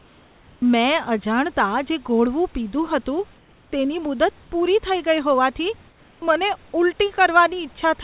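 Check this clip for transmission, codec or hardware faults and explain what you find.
One fault recurs: comfort noise in place of the background. From 3.38 to 3.72 s and 5.88 to 6.22 s, the room background turns steady, featureless and about 3 dB quieter. This is likely discontinuous transmission, with the receiver filling pauses with synthetic noise.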